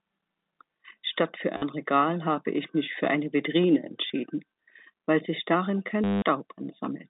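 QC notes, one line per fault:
1.57–1.62 s, 4.08–4.10 s and 6.04–6.22 s, packet loss with last packet repeated: gaps of 50, 20 and 180 ms get filled by replaying the last chunk. The long one buzzes at about 100 Hz, which fits 10 ms packets, over the narrow phone-line band.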